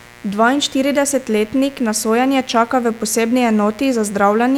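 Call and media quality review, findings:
Mains buzz, 60 Hz, whole clip. Steady raspy buzz about 25 dB under the speech. Spectrogram: harmonic comb at 60 Hz multiples reaching several kHz. Waveform: sharp spikes at 120 Hz. Probable dimmer, rectifier or unshielded cable.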